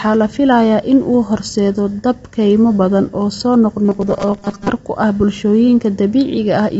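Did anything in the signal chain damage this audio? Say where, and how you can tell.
Yes. At the codec stage, the whole clip was likely coded with low-delay AAC compression (AAC-ELD) at a low rate, one that fits around 24 kbps. Too few bits are spread across the frequency lines of each short frame, so the speech sounds grainy and rough, with plainly audible coding damage and noise filling the gaps between harmonics. Nothing remains above 7.8 kHz, which shows the encoder dropped the top band to save bits.

At the driver or buffer stage, there is robotic sound from repeated short buffers between 3.85 and 4.71 s, starting after "kaymo badan oo soo" and ending before "ku ah". New audio likely arrived too late, so playback kept looping the last short block while the real signal was skipped, with roughly half of that stretch being repeats. The loop imposes a rigid, metallic 200 Hz buzz, which fits a 5 ms buffer.

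In the analogue or driver path, a single loud pop sits at 5.20 to 5.23 s, just after "ku ah". A sudden step or pulse, from a plug, switch, static discharge or driver glitch, was likely added on top of the signal, and it peaks around 5 dB above the surrounding speech. It is heard as one sharp pop, and the speech carries on underneath it.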